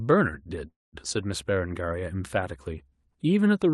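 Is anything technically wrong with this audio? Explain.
Yes. There is a call audio freeze from 0.67 to 0.96 s in this speech, likely caused by packets stalling in transit so the jitter buffer ran dry. The receiver filled roughly a quarter of a second by stretching the last sound into a brief fading tail that drops to silence for about 190 ms. The speech then resumes where it stopped, with nothing lost but everything afterward arriving about 254 ms later. The call codec also limits the band to about 12 kHz.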